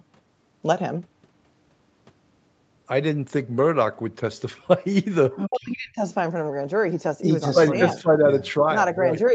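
From 5.36 to 5.49 s a second, fainter voice, about 10 dB under the speech, slips in, likely the other side's voice leaking through past an incomplete echo canceller, not background chatter. From 5.48 to 6.01 s the speech drops by roughly 35 dB, about half a second in all, likely speech suppressed in double talk, distinguishable from a network dropout because it coincides with the leaking voice.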